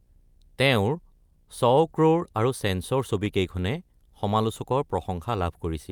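A low buzz sits under the speech for the whole clip, about 45 dB below it, with fine hash riding on top. This is video or display buzz: a screen or video cable is coupling into the audio path, and the buzz follows a 60 Hz picture field rate.

Also present throughout is clock drift between sender and receiver. The sender's audio clock runs roughly 2% slow relative to the receiver's. The receiver's jitter buffer therefore keeps draining, so the stream has to be stretched to keep playback fed.

From 0.74 to 5.31 s small edits recur at uneven spacing. These are repeated timing corrections. Running at 99% speed, the receiver repeats short slices of audio to cover the slow sender, adding about 50 ms overall, always in the same direction.

Between 2.68 and 4.09 s, about four tiny ticks or smears break the otherwise clear speech. These are scattered short gaps: a handful of packets arrived late or not at all. 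Each hole was patched by extending the preceding sound, the longest about 10 ms and roughly 30 ms in total.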